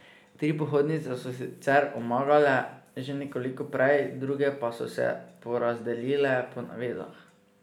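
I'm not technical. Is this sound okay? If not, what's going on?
Yes, this sound is okay, and nothing is going on that needs fixing.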